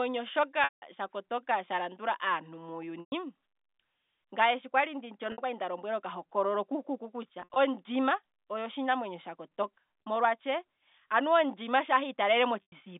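Packet loss with pitch repetition breaks the speech at 0.64 s (180 ms, ending just before "tsha kotonga"), 3.00 s (120 ms), 5.32 s (60 ms, before "okwali nda lombwelwa oka"), 7.40 s (100 ms scattered over 160 ms, after "lombwelwa oka hokololo kukuku"), 10.02 s (40 ms) and 12.62 s (100 ms). Each lost stretch fits 20 ms packets, refilled by looping the last pitch period. The short gaps sound like a held, buzzy tone. The 180 ms gap decays to silence. On a spectrogram, frozen harmonic stripes fade out within the band-limited G.711 telephone coding, and on the waveform identical periodic cycles shrink in amplitude.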